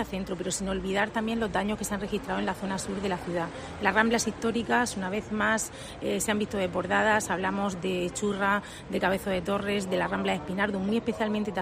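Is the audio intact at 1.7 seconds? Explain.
Yes, the audio at 1.7 seconds is intact, with no dropout, click, distortion or other fault at that moment.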